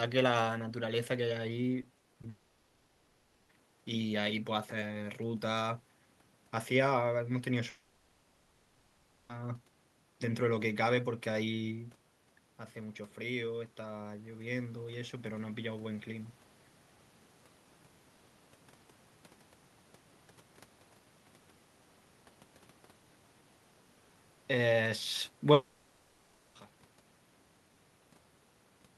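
From 1.81 to 2.25 s, repeated packet loss produces choppy, robotic sound. Five short gaps, the longest 40 ms, are patched by repeating the last sound.

From 2.29 to 3.51 s, the sound turns into a smeared, continued buzz for about 1.2 s. This is likely a long network dropout. The missing audio was filled rather than played.

The same smeared fill returns from 7.69 to 9.31 s, lasting 1.6 s, with no silence in it.

From 11.64 to 16.37 s, automatic gain rising is heard. The talker moves back, so the level falls by about 9 dB. The gain then slowly lifts voice and background together by about 5 dB.

A third filled stretch runs from 25.53 to 26.57 s, about 1 s long. It falls within the smooth fade-out that ends at 26.93 s.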